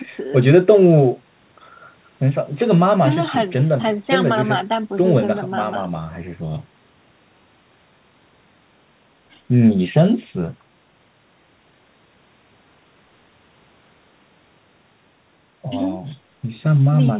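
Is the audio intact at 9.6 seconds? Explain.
Yes, the audio is intact at 9.6 seconds, with no dropout, glitch or other fault at that moment.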